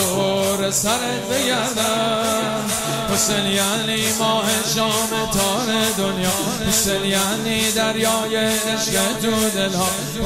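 No technical fault can be heard anywhere in the audio, which keeps a steady, intact signal throughout.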